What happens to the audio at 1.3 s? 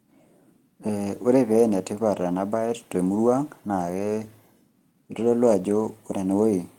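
Nothing goes wrong at 1.3 s; the speech carries straight through that moment with no dropout, click, distortion or other fault.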